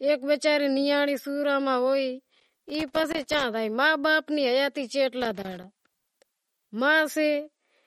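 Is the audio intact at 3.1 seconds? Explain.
No, not at 3.1 seconds. That moment falls inside a burst of loose connector crackle running from about 2.35 to 3.44 s, ending just before "زائے ما باپ". What you hear is a rough, irregular scratching and crackling laid over the speech. It's the sound of a worn or dirty contact flickering between touching and not touching, so the signal keeps getting chopped.

Under that, and through the whole clip, there's a watery, swirly quality with a metallic edge on the s sounds. Consonant onsets are smeared, and nothing comes through above 18.6 kHz. That's likely MP3 compression at a low bitrate, something in the region of 48 kbps. Starved of bits, the encoder drops faint frequency detail that flickers in and out from frame to frame and chops the top end off at a fixed point.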